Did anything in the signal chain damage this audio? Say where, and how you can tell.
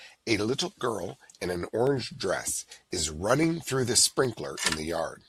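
Yes: a single sharp click at 1.87 s, likely dropped samples in the driver or buffer stage, where a fraction of a millisecond vanished and the waveform jumped.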